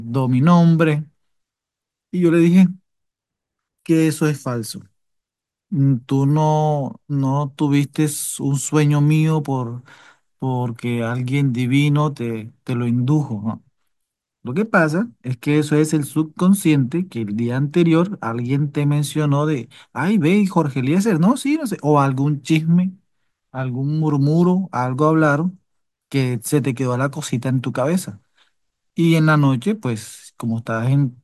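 No audible technical faults anywhere in the speech recording.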